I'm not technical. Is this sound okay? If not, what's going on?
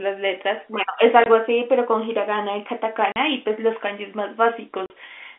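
No. The speech, which sounds like an ordinary phone line, has three brief holes from packet loss filled with silence, at 1.24 to 1.26, 3.12 to 3.16 and 4.86 to 4.90 seconds. Each gap starts and stops abruptly, and they last 20 or 40 milliseconds, which fits lost 20-millisecond chunks of the call. That hard, silent cut sets it apart from a receiver that papers over missing pieces.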